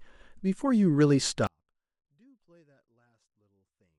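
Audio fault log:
1.47 s to the end: audio dropout to a faint residue. The speech cuts out abruptly mid-flow and never recovers. What's left is a faint ghost of the signal, roughly 40 dB below its normal level, so you can just about tell something is still there. It's a hard drop, nothing like a natural pause or fade, which likely points to the feed being lost upstream while the chain after the break stayed live.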